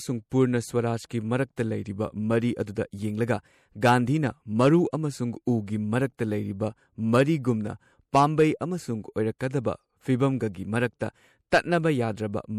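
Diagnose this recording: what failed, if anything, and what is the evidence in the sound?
MP3 compression runs through the whole recording, a codec-stage fault. The speech has a watery, swirling texture with plainly audible damage, and nothing sounds above 18.9 kHz. This likely comes from an MP3 encode at a rate that fits about 64 kbps, with weak frequency lines dropping in and out between frames.

Pre-echo occurs at 9.39 s, just after "ꯄꯥꯝꯕꯩ ꯑꯃꯁꯨꯡ", also at the codec stage. A brief hiss, about 19 ms long, comes before a sharp attack and softens it. Quantisation noise sized for the loud onset was spread across the whole transform block, filling the quiet moment before it.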